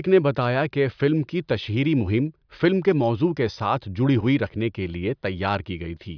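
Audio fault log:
No technical faults can be heard anywhere in the speech signal.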